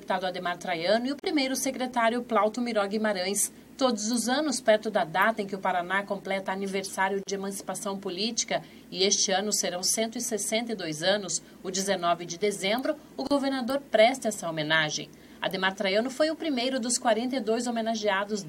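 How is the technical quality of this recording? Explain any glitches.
The recording has one recurring fault: a gap at a join of encoded pieces, heard three times. The audio was encoded as separate six-second pieces and joined without trimming the encoder's start-up delay and end padding. At 1.20–1.23 s, 7.23–7.27 s and 13.27–13.31 s, a hole of about 37 ms opens in continuous sound with smeared edges. The sound then resumes exactly where it stopped.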